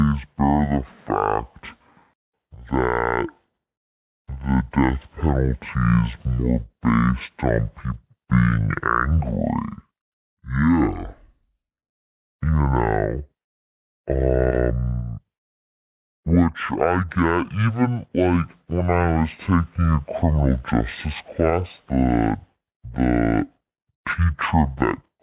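From start to end the speech runs at half speed and sits a full octave low, 12 semitones down: a wrong sample rate fault, with samples played at half the rate they were captured at and never converted, which fits 16 kHz material played at 8 kHz. Voices sound slow, heavy and drawn out. On a spectrogram, harmonics and formants sit at half their usual heights, with nothing above 4 kHz. The waveform shows every syllable stretched to twice its length.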